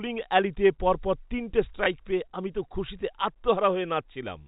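At 1.84 s, right after "অ্যালিতে পরপর তিনটে", there's a brief packet loss with last packet repeated: about 20 ms replayed, giving a small blip through the telephone-band G.711 sound.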